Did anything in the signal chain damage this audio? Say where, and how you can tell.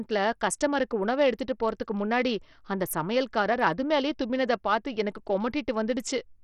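Yes, at the codec stage. Throughout the speech the treble flickers in and out, with a gritty, granular noise and aliasing riding on the sound, the likely mark of heavy Bluetooth SBC compression at a starved bit pool, around 64 kbps. On a spectrogram the upper sub-bands show patchy, blocky gaps that come and go frame to frame below the 20.8 kHz ceiling. Lower bands carry coarse quantisation noise. The simple bit allocation gives the weak top bands few or no bits.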